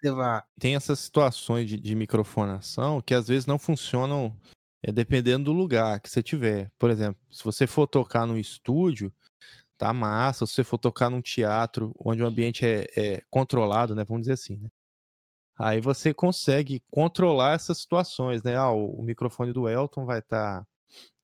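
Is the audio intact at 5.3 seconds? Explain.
Yes, the speech runs cleanly through 5.3 seconds, with no dropout, click, distortion or other fault at that point.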